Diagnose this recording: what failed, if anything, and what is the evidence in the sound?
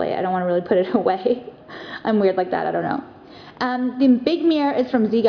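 Nothing in the sound points to a failure at any stage, so there's no fault to trace here.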